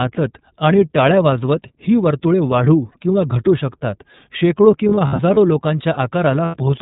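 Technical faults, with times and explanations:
Throughout: iLBC codec. Band-limited audio with nothing above 4 kHz, and a slightly rough, synthetic edge from the plainly audible coding damage. This fits iLBC's 13.33 kbps mode with 30 ms frames, unlike a plain low-pass filter, which would dull the sound without adding roughness.
4.89–5.37 s: lost iLBC frames. About 180 ms of audio drops out in short scattered gaps over nearly half a second, which fits six lost 30 ms frames. The longest single gap is well under a tenth of a second. Each gap is filled by a repeated, buzzy, breathy pitch cycle, and the sound snaps back cleanly because every frame decodes on its own.
6.45–6.57 s: lost iLBC frames. This is 90 ms of lost audio, which fits three lost frames. The decoder bridges it with a held, slightly buzzy vowel-like tone mixed with noise, not silence or a click. Recovery afterwards is immediate, with no lingering smear of the kind predictive codecs leave.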